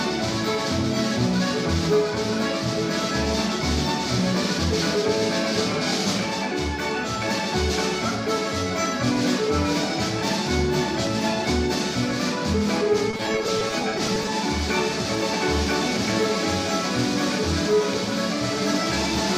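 Repeated packet loss, 13.11 to 14.28 s: frequent dropouts of up to 20 ms were patched by extending prior sound, leaving choppy, robotic audio.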